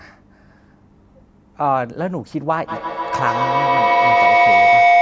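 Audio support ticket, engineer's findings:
Feedback howl, 2.68 s to end of clip. Tone near 700 Hz building to about 8 dB above speech, repeats roughly 150 ms apart. Probable cause: two call devices in one room; the mic-to-speaker loop gains level each pass, so repeats grow instead of decaying. Call mic processing audible as a normal band limit, no content above 8 kHz.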